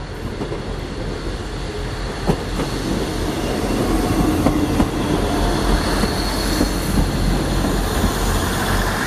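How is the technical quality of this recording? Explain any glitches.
No technical glitches can be heard anywhere in the recording. There is nothing here that needs explaining.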